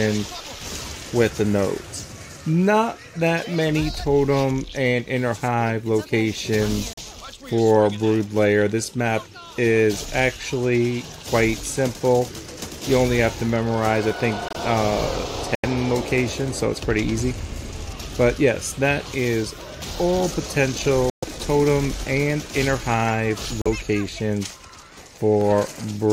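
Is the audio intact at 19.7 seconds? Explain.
Yes, the audio is intact at 19.7 seconds, with no dropout, click, distortion or other fault to be heard at that moment.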